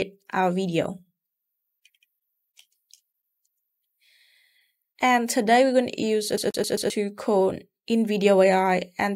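CD stuck on one turn, 6.37 to 6.9 s: a scratch keeps jumping the laser back, replaying a 132 ms slice four times as a fast, even stutter.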